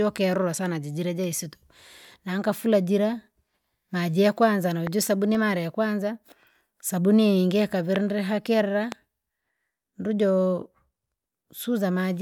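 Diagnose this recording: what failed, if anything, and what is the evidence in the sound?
Three sharp, isolated pops jump out of the speech at 4.87, 7.96 and 8.92 s, the first roughly 10 dB above the signal and the later two nearer 15 dB, with the speech continuing beneath each. This loud pop pattern likely comes from analogue wiring, a voltage spike from a switch, plug or static discharge.

Between 5.19 and 5.50 s three brief ticks, each well under a millisecond, recur at a steady rate. These are CD scratch ticks from playback of the disc: a blemish corrupts more data than error correction can repair on each rotation, so the player conceals the damaged samples.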